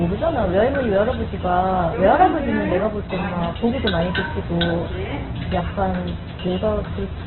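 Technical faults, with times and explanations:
Throughout, Opus compression: the audio is heavily coded and sounds narrow, rough and grainy, with tonal parts turned noisy instead of swirling. It is likely an Opus encoder in its CELT music mode starved of bits, which fits a rate near 8 kbps, so bands are filled by folding or noise. A spectrogram shows nothing above 4.2 kHz, a hard ceiling, and smeared, speckled texture below it.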